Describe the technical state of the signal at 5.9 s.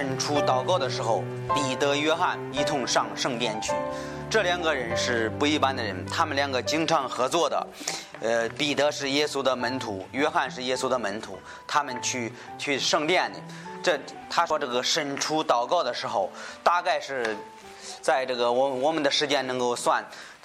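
At 5.9 s the signal runs intact, with no dropout, distortion or other fault at that moment.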